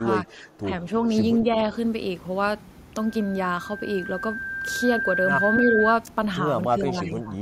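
From 0 to 0.85 s, 1.43 to 1.69 s and 6.68 to 7.38 s the speech sinks by up to about 10 dB, likely speech suppressed in double talk. Around 5.56 to 5.73 s there's a faint copy about 329 ms late, roughly 15 dB down, likely an echo leak.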